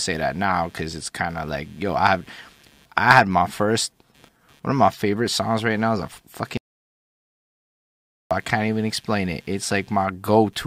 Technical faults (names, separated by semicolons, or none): computer activity noise; audio dropout to silence